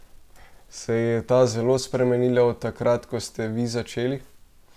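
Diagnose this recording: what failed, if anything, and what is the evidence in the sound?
Nothing failed in this recording.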